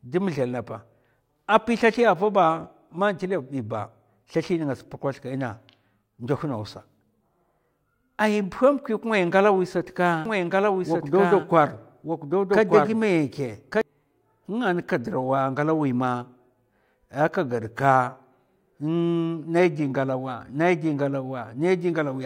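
From 10.25 s to 13.81 s the speech is doubled: a second, full-band copy runs about a second behind the original and somewhat quieter. This doubled audio track is likely a second capture through a slower path, or an edit that left two copies out of step. Unlike an echo or room reverb, the copy has no decay or added room colour, and it appears and vanishes abruptly at those boundaries.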